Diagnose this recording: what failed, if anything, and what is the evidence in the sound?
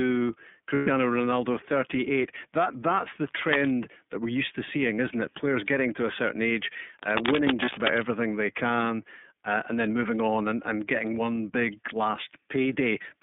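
The whole clip runs through the iLBC codec, a codec-stage issue. The audio is band-limited to roughly 150 Hz to 3.6 kHz, with the slightly rough, synthetic edge that stays audible throughout. The rate and framing fit iLBC's 13.33 kbps, 30 ms mode.

There are lost iLBC frames at the network stage. From 0.74 to 0.88 s the decoder papers over a gap of about 120 ms, roughly four 30 ms frames, with a buzzy held-vowel sound. A shorter patch at 7.65 to 7.70 s fits one lost frame. Recovery is immediate both times because iLBC frames stand alone.

Cable scratch noise shows up from 3.21 to 3.72 s and again from 6.97 to 8.07 s. It's dense, uneven scratchy rustling at about the same loudness as the speech. That points to the analogue wiring, most likely a worn cable or connector being moved so its contact resistance jumps around.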